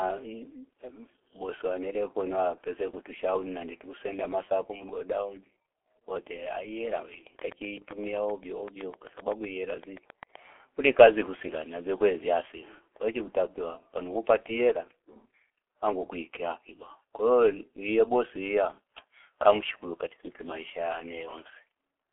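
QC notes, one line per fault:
Throughout, G.723.1 codec: the speech sounds muffled and hoarse, with smeared consonants and nothing above 3.7 kHz, squeezed into a 300 Hz to 3.4 kHz telephone band. It is heavily damaged by a 6.3 kbit/s low-rate speech coder that models the voice coarsely in long frames and discards fine detail.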